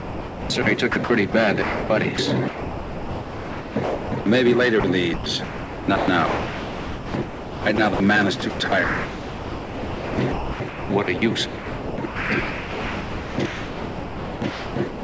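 Sound chopped by the voice detector runs from 0.0 to 0.66 s, 0.92 to 1.34 s, 2.48 to 4.26 s, 5.14 to 8.0 s, and 8.4 s to the end. A sending-side detector likely kept switching transmission on and off, so quiet stretches and edges were swapped for synthetic comfort noise. Over the last run, more than 5 s of the audio is missing. The result is choppy. Sound dropped by the voice detector appears at 1.62 to 1.90 s (280 ms), 2.16 to 2.18 s, and 4.80 to 4.84 s. In each, the detector likely judged the audio to be background and stopped sending, and the receiver filled the gap with steady comfort noise until transmission resumed. The call path's band ending near 8 kHz fits a G.722 wideband codec.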